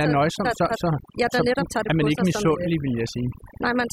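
Overdone noise removal runs through the whole speech clip. Frequency bands near the noise floor are cut away, leaving near silence with twinkling specks.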